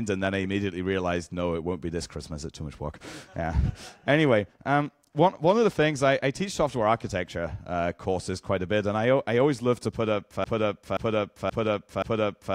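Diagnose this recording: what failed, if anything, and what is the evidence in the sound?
From 10.44 s to the end, a 0.53 s fragment repeats four times back to back, a broken-record loop. The repeats are identical and do not fade, unlike an echo. Likely a stalled player or stream buffer kept resending its last block, losing the audio that should have followed.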